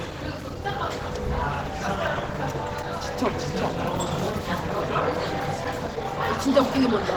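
A short everyday-sound recording carries plainly audible Opus compression from start to finish: tonal and textured parts come out grainy and rough rather than clean, with a hoarse quality, likely from a low-bitrate encode around 16 kbps that pushed the encoder into its hybrid speech-and-music mode. On a spectrogram the energy still reaches about 20.2 kHz, but the upper bands look noise-filled and blotchy instead of showing crisp harmonic detail.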